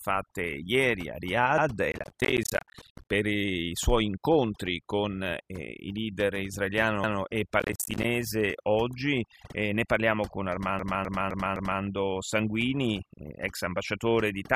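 Overdone noise removal runs through the whole recording. Bands near the noise floor are cut away, leaving twinkling specks in near silence.

From 1.92 to 3.10 s, just before "i suoi incontri con", there is processor overload crackle. Many short buffers, around ten milliseconds each, miss their deadline and drop to silence. The result is a gritty tearing. The same crackle returns from 7.60 to 8.04 s.

Repeated frames follow at 10.79 to 11.82 s, right after "ne parliamo con". A 256 ms block plays four extra times, which fits a few frames sent again. It stutters and adds 1.02 s.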